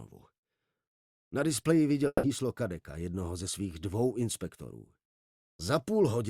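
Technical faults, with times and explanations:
2.07 to 2.26 s, long network dropout: a fading buzz fills about 160 ms, then 40 ms of silence, and the audio resumes with that chunk gone, likely from lost packets.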